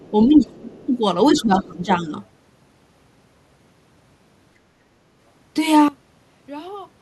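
From 0.0 to 0.11 s and again from 0.34 to 0.87 s a faint second voice sits roughly 30 dB under the speech: the other side's voice leaking through, likely loudspeaker sound the echo canceller failed to remove from the microphone.

Overlapping that, from 0.28 to 0.7 s the speech dips by around 15 dB, with a smaller dip of about 5 dB at 0.86 to 0.91 s and a longer one from 1.32 to 2.12 s, again near 15 dB deep. This is speech suppressed in double talk, likely the canceller turning everything down because it could not separate the talker from the echo while both were active.

From 5.88 s to the end the speech suddenly drops by about 20 dB. That points to one channel inverted, likely reversed polarity on one side, so the common centre content cancels when the two channels are summed to mono.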